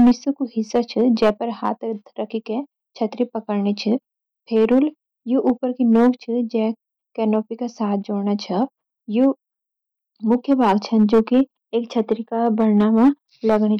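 Throughout the speech, every louder moment carries a gritty crackle and a brittle edge on its peaks. The cause is hard clipping: the signal was driven about 7 dB past what one stage in the chain could pass, so the tops of the waveform were sheared flat. Only a small share of samples, around 2 percent, hit that ceiling, but each flattened peak sprays harmonics high into the spectrum, which is what the ear picks up as harshness.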